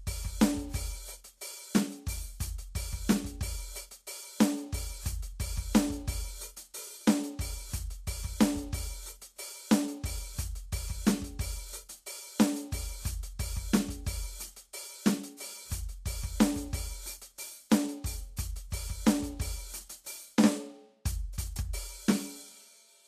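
From start to finish the music has no content above 14.2 kHz, and the remaining treble turns hissy and grainy, with roughened tones and softened attacks. This points to Vorbis compression at a low bitrate, likely around 35 kbps. Unlike a plain low-pass filter, the treble that survives is coarsely replaced by noise.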